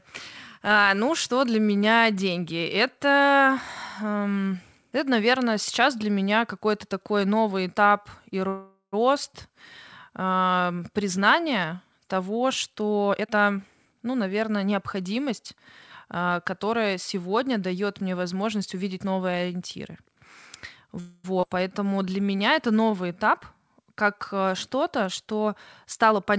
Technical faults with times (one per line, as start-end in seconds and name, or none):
8.48-8.95 call audio freeze
13.10-13.90 jitter buffer speed-up
13.85-13.88 skip ahead
21.00-21.27 call audio freeze
21.40-21.46 skip ahead
21.79-23.75 jitter buffer slow-down
25.03-26.37 jitter buffer speed-up